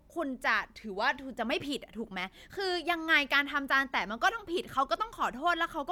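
Nothing goes wrong anywhere in this bit of speech, so there's no technical fault to point to at any moment.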